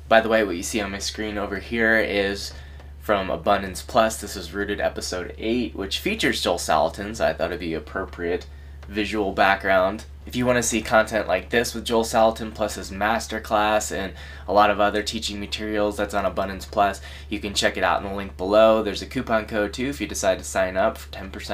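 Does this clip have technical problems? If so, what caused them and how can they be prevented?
No, there are no technical faults to point to anywhere in the audio. With nothing gone wrong, there is no cause to trace and nothing that needs preventing.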